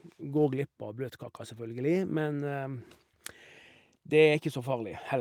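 No technical faults can be heard in this speech recording.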